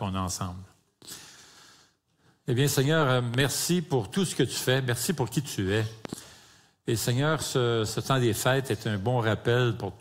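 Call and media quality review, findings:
Loud pop, 3.34–3.43 s: a sharp double pop, two closely spaced clicks, standing roughly 10 dB above the sound, which carries on underneath. Likely a voltage step from a plug, switch, static discharge or driver glitch, shaped in the downstream circuitry.

Loud pop, 6.05–6.15 s: the same paired pop at a similar level, about 0.1 s long. Likely the same transient-injection mechanism, an electrical pulse summed onto the signal rather than replacing it.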